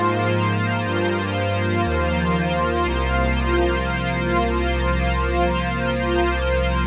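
Nothing here calls for a fault note, as no technical problems turn up anywhere in the clip.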